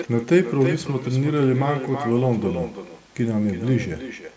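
Echo with no canceller runs throughout the speech. The far end's loudspeaker is feeding its microphone, and nothing strips that out, so every phrase returns roughly a third of a second later, about 10 dB quieter and thin, above call audio that tops out at 8 kHz.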